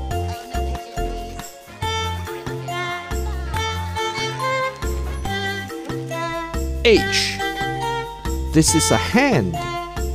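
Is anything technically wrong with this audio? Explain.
Yes, there is one fault: an electrical switching spike at 3.56 s. A switch, motor or static discharge near the equipment likely produced a brief arc that the audio line picked up as interference. It lasts only a few milliseconds and is superimposed on the audio rather than replacing it, peaking at about -15 dBFS. It is heard as a sharp snap or a tight cluster of clicks.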